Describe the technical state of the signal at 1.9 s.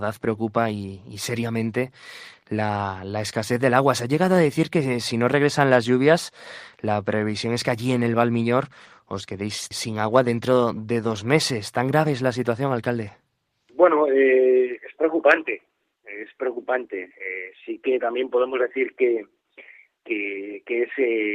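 At 1.9 s the signal is intact, with no dropout, clipping, distortion or other technical fault audible at that point.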